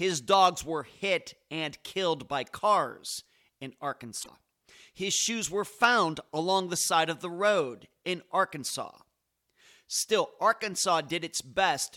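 At 4.19 s, right after "killed by cars in", the speech breaks up for about 90 ms, to 4.29 s. That's damaged data in a compressed stream: a stretch of the coded bytes is wrong, so the decoder can't parse those frames, loses sync and hunts for the next valid frame header. A second, much briefer blip of the same kind pops up at 11.09 s, near the end.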